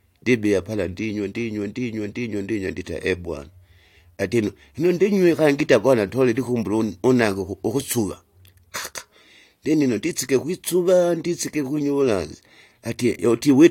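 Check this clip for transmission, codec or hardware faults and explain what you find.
No faults turn up in this speech clip. Nothing heard in it points to a problem anywhere along the chain that captured or carried it.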